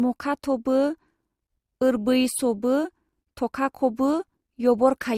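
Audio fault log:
throughout — transcoding between lossy codecs: the speech carries two overlapping layers of coding artefacts, from MP3 and from Opus, heard together. This likely comes from an MP3 encode near 64 kbit/s re-encoded to Opus near 48 kbit/s. The audio contains nothing above 20.1 kHz.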